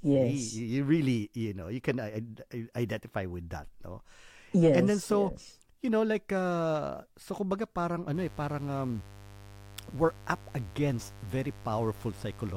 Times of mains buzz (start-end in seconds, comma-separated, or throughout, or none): 8.12-12.56